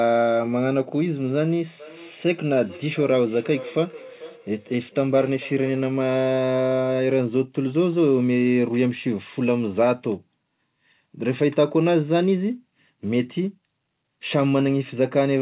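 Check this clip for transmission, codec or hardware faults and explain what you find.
There is one fault: a feedback echo between two devices, from 1.79 s to 6.07 s. Two devices on the same call were close enough that one device's loudspeaker fed straight into the other's microphone. Each echo canceller removes only its own playback, so that sound was sent back into the call. The result is a thinner, ringing copy of the speech trailing it by roughly 0.4 seconds, peaking at about 17 dB below the speech, over audio band-limited to 4 kHz by the G.711-style call codec.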